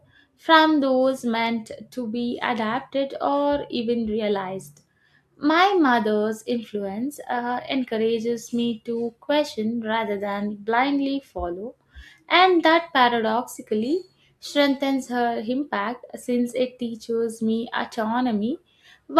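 Nothing technically amiss stood out on listening to this speech recording.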